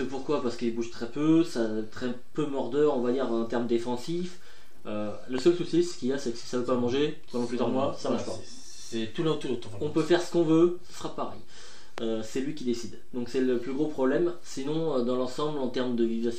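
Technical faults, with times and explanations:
5.38–5.40 s and 11.98–12.00 s, loud pop: A sudden voltage step or pulse, likely from a plug, switch, static discharge or driver glitch, entered the signal path. The following circuits shaped each pulse into a brief, sharp transient about 20 ms long. Each is heard as a single hard pop sitting on top of the sound, which continues underneath. The first peaks roughly 10 dB above the surrounding audio, and the second is louder, roughly 15 dB above it.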